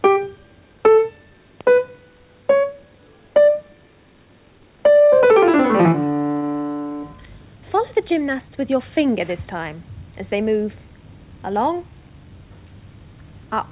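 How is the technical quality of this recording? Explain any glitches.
Nothing stood out on listening; there are no glitches to explain in this recording.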